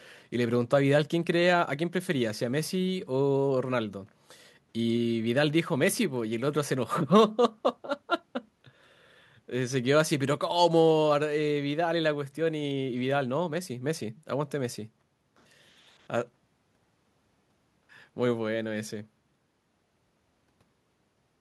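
No technical faults are audible.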